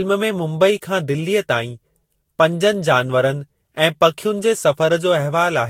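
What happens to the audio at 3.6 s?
At 3.6 s the speech sounds swirly, hollow and smeared with nothing above 16.7 kHz, as across the whole clip: likely generation loss from about five successive Vorbis re-encodes.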